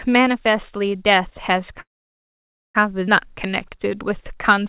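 Call audio freeze, 1.8 to 2.77 s: the sound stops and a short trace of it continues before dying away, leaving about 0.9 s of silence within a gap of roughly 945 ms. The likely cause is delayed packets draining the jitter buffer, so the receiver briefly extended the last sound and then had nothing to play. When delivery resumed, the speech carried on from exactly where it broke off, so the freeze inserts time rather than removing any.

Skip ahead, 3.07 to 3.09 s: the speech jumps forward abruptly with only a brief join of a few milliseconds, and about 0.7 s of audio is gone. This happened because a stretch of audio was dropped while later audio was already queued. The two sides are spliced almost directly, so the listener hears a sudden cut rather than a pause.

Jitter buffer slow-down, 3.28 to 4.64 s: to build up a reserve, the receiver repeated single pitch periods and fragments of pauses, adding about 126 ms. 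Playback drops to 91% speed while the pitch stays the same, so the speech sounds drawn out. Throughout, the telephone-band call path, with nothing above 4 kHz in a way that fits G.711, gives the audio a narrow, muffled tone.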